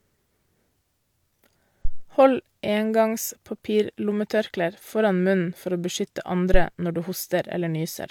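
At 1.85 s a phantom power thump breaks into the speech: a deep, low-frequency knock lasting until about 2.07 s, its tail dying away over roughly 49 ms. A second, shorter thump follows at 6.54 s, ending by 6.64 s with a decay of about 24 ms. Both come from a supply being switched on a live input, so the DC step passes through the coupling capacitors and reaches the signal path as a brief low-frequency pulse.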